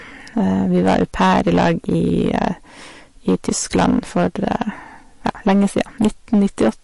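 From start to finish, the signal was driven about 12 dB past what one stage could pass, so roughly one sample in twenty was sliced flat at the top. Those squared-off peaks add high harmonics, heard as clipping distortion on the louder stretches of speech throughout.

Also present across the whole clip is a plainly audible coded quality: nothing is left above 11.3 kHz, and the sound has a watery, swirling texture, with s sounds chirping and attacks smeared. This is likely MP3 compression at a low bitrate, fitting around 48 kbps, where weak frequency lines are dropped and return frame by frame.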